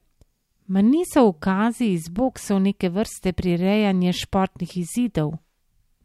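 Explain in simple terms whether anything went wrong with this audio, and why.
Nothing went wrong with this audio, so there is no problem to explain.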